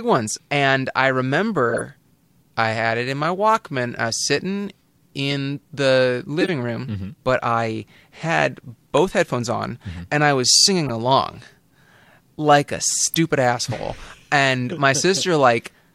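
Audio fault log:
1.69–1.82 s, 3.24 s, 5.30–5.34 s, 6.41–6.49 s, 8.97 s, 10.86–10.90 s, 13.12–13.15 s, 15.14–15.22 s: corrupt frame decoded. Damaged compressed frames were played anyway, putting energy at wrong frequencies. Each sounds like a brief chirp or noise burst, peaking around -15 to -5 dBFS, about -5 dBFS at worst. Landmarks: 3.24 s follows "I had it in"; 8.97 s falls between "but I had" and "headphones on"; 13.12 s falls between "like a" and "asshole and".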